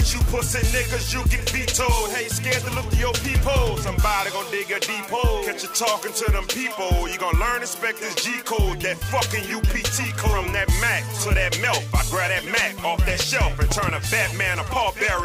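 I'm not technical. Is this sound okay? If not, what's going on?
No. Near the end, from 13.71 to 13.91 s, there is a loud pop: two sharp pops in quick succession, well above the level of the sound, which carries on underneath. A sudden electrical jolt, likely from a plug, switch, static or driver glitch, causes this.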